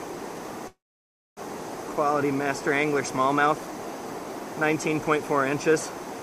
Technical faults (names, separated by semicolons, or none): call audio freeze